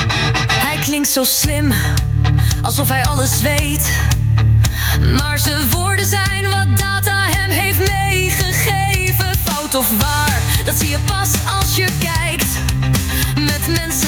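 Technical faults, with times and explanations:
Throughout, gain pumping: the input gain is likely set far too high for the microphone, so a fast limiter or compressor clamps down each time a loud sound arrives and lets go once it passes. The gain swings by roughly 10 dB between loud moments and the gaps. Loud and quiet passages sit unnaturally close in level, leaving the sound squashed.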